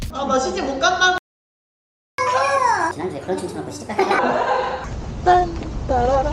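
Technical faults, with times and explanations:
1.18–2.18 s, playback stall: the sound stops mid-flow for 1.0 s of silence, likely because the player ran short of data or its thread was blocked.
2.18–4.19 s, catch-up at higher speed: the sound runs 1.5 times fast and about seven semitones high while the player resamples its backlog, then returns to normal.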